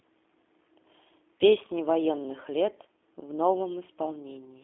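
Speech that sounds thin, slightly rough and synthetic throughout, confined to a telephone band of about 250 Hz to 3.5 kHz with nothing above 3.8 kHz. This is G.729 codec damage: the voice is rebuilt from a vocal tract filter, pitch predictor and a few pulses per frame, which fits an 8 kbit/s G.729A line.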